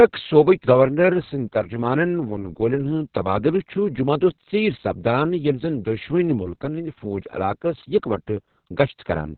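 From start to finish the speech sounds muffled, hoarse and slightly robotic, with no brightness above about 4 kHz. This is heavy Opus voice compression: the SILK coder narrows the band and coarsely codes the excitation in long 60 ms frames, which fits a bitrate around 6 kbps.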